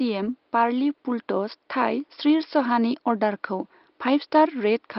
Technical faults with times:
none

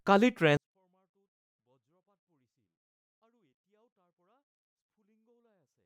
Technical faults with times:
0.57-5.86 24-bit alignment error (too quiet)

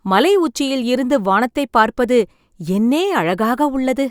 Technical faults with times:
none

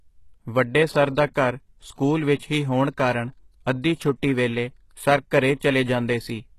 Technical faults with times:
0.00-6.58 HE-AAC compression

